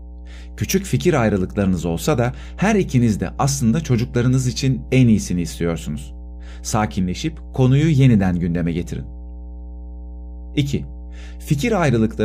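A ground loop or nearby transformer is feeding the 60 Hz power line into the signal, leaving mains hum throughout as a steady low drone roughly 15 dB below the speech.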